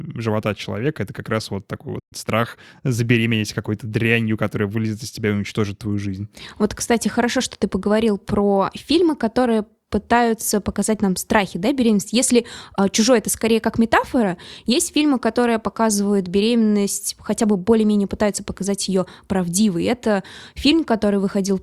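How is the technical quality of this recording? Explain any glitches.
Two glitches stand out, both near the start of the speech.

At 1.99 s, right after "как раз вот такой", there is a playback stall. The sound simply stops in mid-flow and the output goes silent for about 120 ms. The likely cause is the player running short of buffered data, or its playback thread being blocked for a moment. When output resumes at 2.13 s, the speech continues from where it broke off.

From 2.13 s to 3.31 s comes time-compressed catch-up. The player is clearing the backlog the stall built up. It cuts out tiny slices of audio and cross-fades the joins. The result is speech running at 1.1 times normal speed with its pitch unchanged. It sounds slightly hurried.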